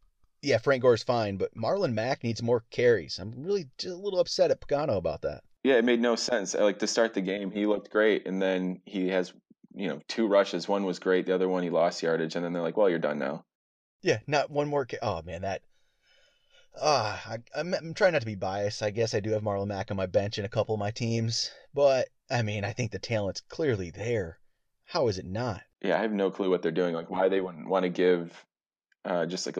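Nothing in the speech recording stands out as a technical fault, so there's no event to point to at any moment along the way.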